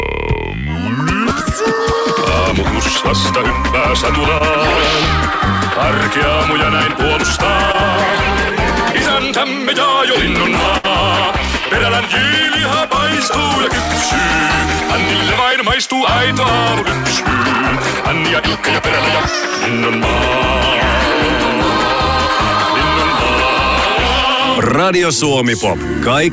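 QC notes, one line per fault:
4.38–4.42 s and 7.72–7.76 s, short concealed packet loss: about 20 ms of audio never arrived each time. The receiver extended the preceding sound, then blended back, giving a brief smear.
10.78–10.86 s, burst of packet loss: about 60 ms went missing. The receiver continued the last sound for roughly 61 ms while turning it down, so it becomes a held buzz or fading hiss before resuming later.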